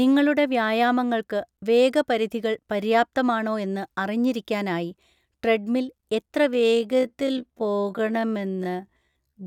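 A time-stretched section runs from 6.47 s to the end at 9.46 s. The speech suddenly slows to 0.52 times its pace with its pitch unchanged, sounding dragged, likely because software lengthened it by repeating short slices of audio.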